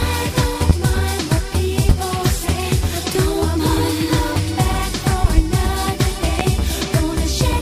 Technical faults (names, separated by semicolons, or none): loud pop